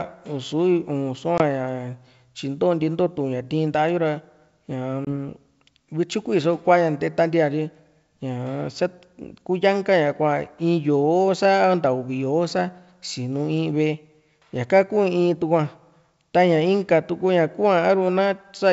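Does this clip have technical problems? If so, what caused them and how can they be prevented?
Yes. Packet loss on an ADPCM call causes two short, hard-edged silent holes, at 1.38 to 1.42 s and at 5.05 to 5.07 s, each about 20 ms of missing audio, which fits a couple of lost packets. What separates this from a plain dropout is the re-entry. The decoder's adaptive predictor and step size no longer match the sender's, so the speech comes back slightly distorted before settling. The wideband G.722 coding itself stays clear. Preventing it needs packet loss concealment, or periodic decoder state resets, together with a network path that keeps packet loss low.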